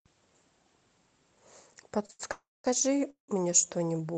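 Speech that passed through an Opus call path, heard with its band limited near 8 kHz. Late packets twice emptied the jitter buffer, causing short stalls from a late packet at 2.06–2.11 s and 2.11–2.21 s, where the sound is held and stretched by 30 ms and then 84 ms. A call audio freeze, likely from packets held up in transit, follows at 2.31–2.66 s and 3.10–3.30 s. The sound decays into silence of 200 ms and then 120 ms, and resumes from where it stopped.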